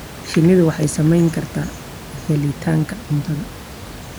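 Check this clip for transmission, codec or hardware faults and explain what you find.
No transmission, codec or hardware faults turn up in this speech clip; the only background sound is room noise sitting about 17 dB below the speech, which belongs to the recording itself.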